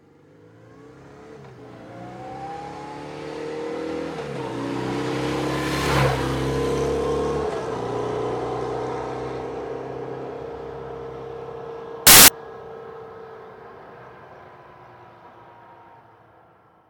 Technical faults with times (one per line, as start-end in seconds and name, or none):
12.07-12.28 samples built from the wrong bytes